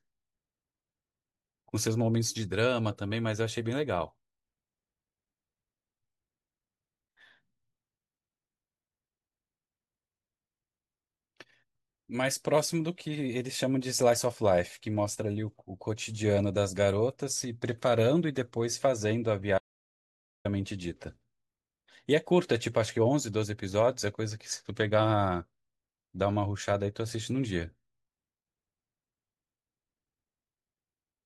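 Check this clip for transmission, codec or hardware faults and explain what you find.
There's one real fault here, an audio dropout to silence running from 19.58 s to 20.45 s, so a bit under a second, about 0.87 s, of the speech just vanishes. The speech cuts off mid-flow and comes back just as abruptly, and the gap in between is dead silence, with no room tone or hiss at all. That points to the input likely being lost briefly, maybe a link hiccup or a momentary mute, while the recorder kept writing silence. Whatever was said in that stretch is simply gone.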